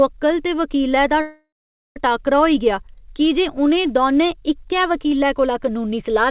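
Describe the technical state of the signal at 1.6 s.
At 1.6 s the signal sits inside a call audio freeze running from 1.21 to 1.97 s. The last sound is stretched into a fading buzz, then dies into about half a second of silence. Packets were likely held up in transit, so the jitter buffer ran dry and the receiver filled the wait. When audio resumes, it picks up where it stopped. Nothing is lost, but about 0.75 s of delay is added. Throughout, the band stops at 4 kHz, as a G.711 mu-law call path would.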